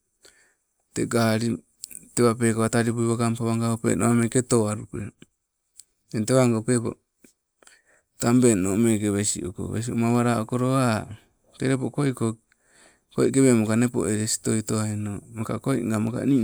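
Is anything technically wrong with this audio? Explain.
No, nothing technically wrong can be heard in this speech recording.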